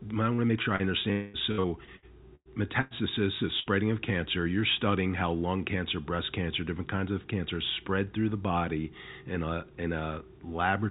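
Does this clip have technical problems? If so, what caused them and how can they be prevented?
Yes. This speech passes through a narrowband call path, consistent with G.711 mu-law at 64 kbps, with nothing above 4 kHz.

Short concealed packet loss at 0.35, 0.47 and 0.76 s: about 30 ms each went missing and was patched by extending the last sound, giving brief smears rather than audible holes. A larger jitter buffer or forward error correction would let these packets arrive or be rebuilt in time.

Long network dropout from 1.12 to 1.37 s: about 210 ms is replaced by a continued, fading sound with no silence, much longer than the smears before it. The likely cause is a stall on the network link, which a steadier connection and redundancy against longer outages would help prevent.

Repeated packet loss (robotic sound) from 1.52 to 2.94 s: six gaps, the longest 99 ms, leave about a quarter of the stretch patched, so it sounds choppy rather than like one gap. 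Fixing sustained congestion or a weak wireless link, and adding loss-resilient coding, would prevent this.

Burst of packet loss from 3.60 to 3.83 s: about 60 ms in a row is lost, heard as a held, fading sound before the audio resumes further on, unlike the single short patches. Packet redundancy and a more adaptive jitter buffer would cover bursts like this.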